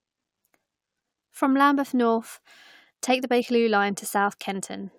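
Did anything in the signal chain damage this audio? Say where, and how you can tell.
No, nothing in the signal chain audibly damaged this speech recording: it stays continuous and stable throughout, with no stage leaving a mark on the sound.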